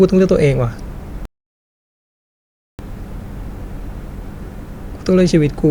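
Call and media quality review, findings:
Rebuffering stall, 1.25–2.79 s: speech drops to silence, resumes where it stopped; about 1.5 s added. Player buffer underrun. Flat waveform, blank full-band spectrogram gap.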